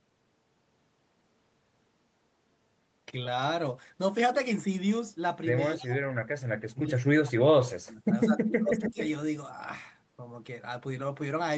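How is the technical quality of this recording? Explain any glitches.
The recording has two kinds of call-processing fault, both from about the middle on, inside a call band that stops at 8 kHz.

Speech suppressed in double talk, 5.66–6.0 s and 6.68–8.99 s: most likely, the echo canceller heard both ends talking at once and couldn't tell its own talker from loudspeaker echo, so it pulled everything down. The speech dips by around 15 dB first, then is cut by as much as 35 dB for about two seconds.

Echo leak, 8.84–9.08 s: the far end's echo canceller likely failed to remove all of its loudspeaker's sound, so some was sent back. A copy of the speech returns 253 ms late, about 10 dB below the direct sound.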